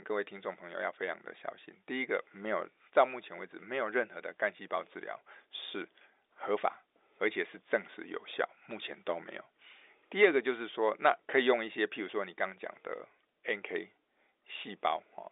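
No faults are audible anywhere in the speech.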